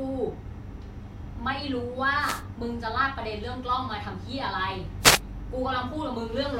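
At 2.20 to 2.43 s and again at 5.01 to 5.20 s, a wireless microphone noise hit: the FM radio link fades, receiver noise surges, and a brief burst of static swishes over the speech.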